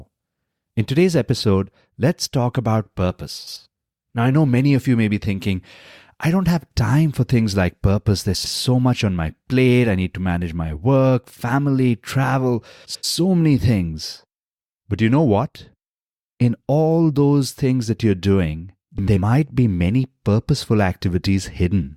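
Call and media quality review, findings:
Frames out of order, speech, at 3.38–3.57 s (after "episode let's talk about"), 8.34–8.53 s, 12.85–13.04 s, 18.98–19.18 s. Garbled flutter. Likely jitter-buffer reordering; two ~93 ms blocks swapped. Unlike packet loss: no gap, no time lost.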